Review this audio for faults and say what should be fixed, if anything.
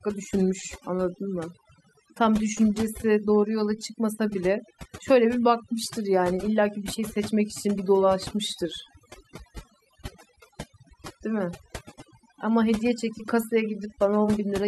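Overdone noise removal runs throughout: bands near the noise estimate are cut, leaving a lowered background that breaks up into twinkling specks. Unlike gating, individual frequencies flicker rather than everything cutting. Prevent it by setting the reduction gentler so some background noise remains.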